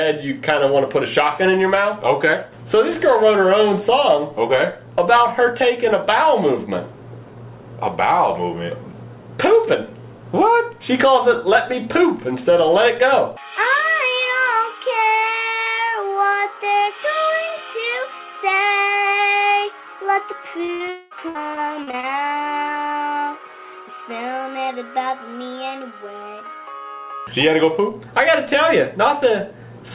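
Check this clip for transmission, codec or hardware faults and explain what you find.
There's a cluster of network trouble between about 20.6 and 22.0 s, on a call path that runs narrowband, with nothing above 4 kHz, which fits G.711 mu-law at 64 kbps.

Short concealed packet loss hits twice, at 20.64 to 20.70 s (about 40 ms) and 20.86 to 20.90 s (about 20 ms). Each time a bit of audio didn't reach the decoder in time, so the receiver stretched out the last sound and blended back in. You hear it as a quick smear or wobble.

A burst of packet loss sits between those two, from 20.74 to 20.82 s, with about 60 ms gone in one go. That's long enough that the receiver's extrapolation has to carry the sound on its own and fade it as it goes. Voiced material turns into a brief held buzz, anything else into a short dying hiss. When real audio resumes, the chunk in between is simply not there.

Right after that, from 20.90 to 21.13 s, roughly 0.22 s drops out and is filled entirely with synthetic continuation, with no stretch of actual silence. 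It sounds like a sustained, fading buzz or hiss that stands in for the real content, and it's likely a long network dropout where nothing arrived for that stretch. The audio picks up again afterward, minus everything in that gap.

Repeated packet loss (robotic sound) follows from 21.29 to 22.05 s. Five separate gaps land in that stretch, the longest about 60 ms, and about a fifth of the span ends up patched. Because each hole is concealed and the next one arrives soon after, the sound turns choppy, with small pieces dropping out throughout.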